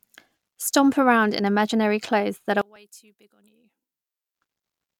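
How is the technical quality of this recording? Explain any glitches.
The recording has three glitches: two tiny skips and one long stretch where the sound nearly disappears.

At 0.76 s, just before "around in imaginary clothes", and again at 2.76 s, just after "imaginary clothes that are", the audio jumps ahead by a few milliseconds. This is likely a dropped buffer (overrun): samples were overwritten before being read, so the two sides join directly.

From 2.62 to 4.35 s, starting after "imaginary clothes that are", almost all the sound vanishes and leaves only a residue about 28 dB down. The likely cause is one channel inverted, so the shared content cancelled when the channels were summed to mono.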